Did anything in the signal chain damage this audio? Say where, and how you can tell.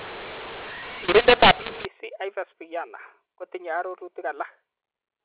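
Yes. At the codec stage, the opening stretch from 0.0 to 1.85 s shows a mu-law and A-law mix-up: samples encoded with G.711 mu-law were expanded with the A-law curve. The two logarithmic tables disagree, so each level maps to the wrong amplitude. The speech turns harsh and gritty, the levels are scrambled, and the gaps fill with hiss because the quietest codes land well above silence. After 1.85 s the mu-law decoding matches, leaving the ordinary 4 kHz telephone band.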